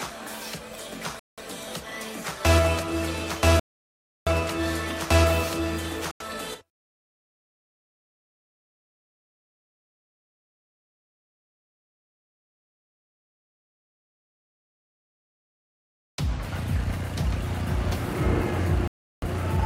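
Four dropouts cut the audio to silence at 1.19, 3.60, 6.11 and 18.88 s, lasting 184, 672, 90 and 348 ms before sound resumes. These are likely Bluetooth stalls, where the headphone buffer ran dry. They appear as flat waveform gaps and blank spectrogram columns.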